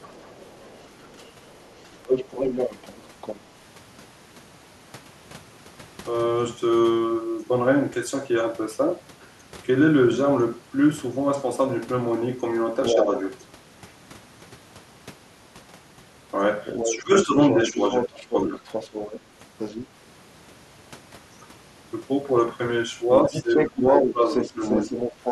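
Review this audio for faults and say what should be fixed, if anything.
The other side's voice leaking through is heard from 0.0 to 3.4 s (roughly 10 dB under the talker), 12.84 to 13.04 s (about level), 16.66 to 19.87 s (a little under) and 23.33 s to the end (about level). This is likely loudspeaker echo that the canceller left in. Unlike room reverberation, it is a separate, different voice rather than a smeared copy of the talker. Proper acoustic isolation or a headset would prevent it.

Speech suppressed in double talk shows as short dips of about 5 dB at 1.13 to 1.21 s and 13.04 to 13.11 s. Deeper cuts come at 16.83 to 18.63 s (up to about 20 dB) and 23.26 to 24.92 s (about 15 dB). These dips are likely the canceller ducking the talker while both sides speak. A network dropout would not line up like this, because the dips line up with stretches where the far voice is leaking through. 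Better double-talk detection in the echo canceller would prevent it.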